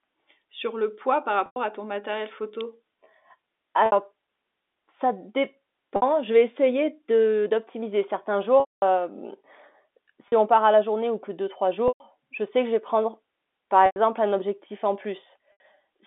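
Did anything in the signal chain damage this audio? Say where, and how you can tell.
Yes. At the network stage, packet loss with pitch repetition hits at 1.46, 3.86, 5.96, 8.6, 10.28, 11.88, 13.86 and 15.52 s. The concealment repeats the last pitch period, so the short gaps sound held and buzzy. The longest gap is 220 ms at 8.6 s, and it fades out.

In the analogue wiring, a single sharp snap at 2.61 s sits on top of the speech without interrupting it, which sets it apart from a dropout. The likely cause is an electrical switching spike.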